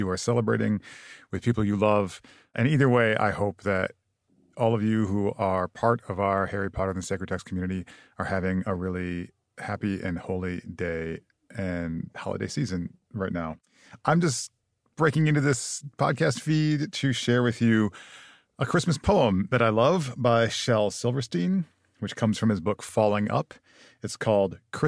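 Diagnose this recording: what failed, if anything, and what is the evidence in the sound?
Nothing failed at any stage of the chain; no audible evidence points to a fault anywhere in the speech.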